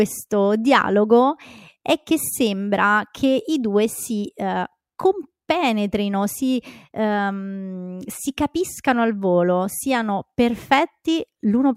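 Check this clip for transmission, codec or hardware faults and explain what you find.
Nothing here points to a transmission, codec or hardware problem; the speech comes through steady and intact all the way.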